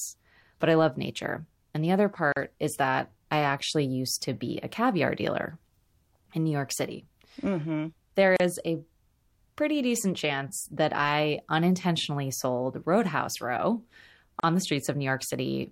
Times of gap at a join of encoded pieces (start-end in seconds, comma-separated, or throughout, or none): 2.32-2.36, 8.36-8.40, 14.40-14.43